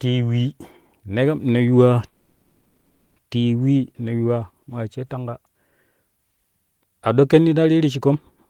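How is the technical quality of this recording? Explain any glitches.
The recording has one glitch, a call audio freeze from 2.07 to 3.18 s, right after "neru ne yuwa". For about 1.1 s the last sound is stretched into a fading buzz or hiss rather than silence. This is likely jitter-buffer underrun from delayed packets. The sound then resumes where it stopped, with nothing lost but everything after arriving 1.1 s late. A spectrogram shows smeared, flattened bands; the waveform shows a decaying, repetitive stretch.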